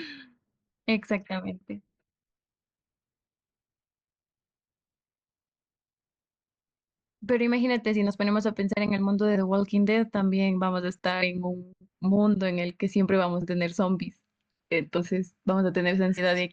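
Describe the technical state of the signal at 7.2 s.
Around 7.2 s the speech signal is intact, with no audible fault at that moment.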